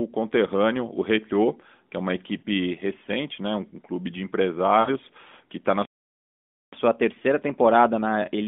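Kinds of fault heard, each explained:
Lost AMR speech frames: Short smeared dips where the decoder repeats the previous frame's pitch and vocal tract shape at falling level, once after "que é uma" for about 40 ms and again after "um um clube de" for about 80 ms, which points to two and then four missing 20 ms frames.
Playback stall: The sound cuts out in mid-flow just after "que está na" and stays silent for about 0.88 s before resuming. The player most likely ran short of buffered data or had its output thread held up, so nothing reached the output until it recovered.
Catch-up at higher speed: When the sound returns after the silence, it runs about 1.1 times fast and roughly one and a half semitones sharp until the end. The player is resampling its backlog to make up the time lost to the stall.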